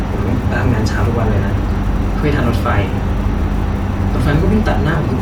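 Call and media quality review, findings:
Video or display buzz, whole clip: steady 60 Hz field-rate buzz with hash above, about 35 dB below the speech. Screen or video cable coupling into the audio path. Spectrogram shows a constant 60 Hz line plus harmonic comb under the speech.

Compressed frames skipped, at 1.00 s: speech jumps ahead roughly 50 ms, fitting about two 24 ms frames missing or rejected by the decoder. Waveform shows a discontinuity at the join.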